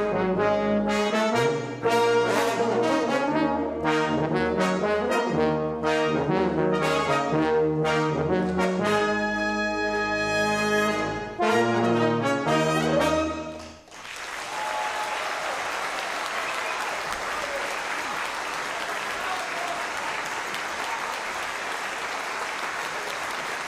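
Nothing in this recording stands out as a technical problem.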